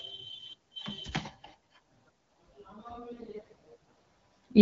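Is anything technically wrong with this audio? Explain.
Yes. AMR bit errors from 3.12 to 3.67 s: around one bit in ten of the weakly protected frame bits arrives flipped, misplacing excitation pulses and skewing gain and spectrum, so the speech turns hoarse and gargly.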